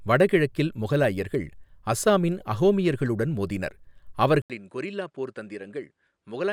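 A speech recording whose input appears to have switched to a poorer device at 4.42 s, likely another microphone. After an 80 ms silence, the sound runs duller to the end at 6.53 s, with nothing above 10.5 kHz, roughly 10 dB quieter, over a faint new background noise.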